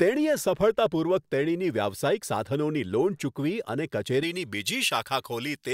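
From about 4.23 s through to the end at 5.74 s, the speech has pre-emphasis left on. The treble was lifted before recording or transmission, but the matching de-emphasis never got applied, so the top end sits about 11 dB hot at 10 kHz relative to 1 kHz. The shape of that tilt fits a J.17 curve. You hear it as a sudden switch to thin, glassy brightness, with the sibilants turning sharp and spitty.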